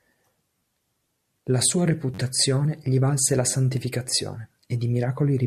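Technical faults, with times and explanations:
2.14 to 2.19 s, repeated buffer: a tiny slice of the speech, about 10.7 ms long (which fits a 512-sample buffer), plays four extra times in a row with a hard join at each repeat. New audio arrived late, so the device replayed its last block. At this size the repeats fuse into a brief buzz near 94 Hz rather than an audible stutter. Unlike a dropout, nothing goes silent, and the speech resumes without any missing sound.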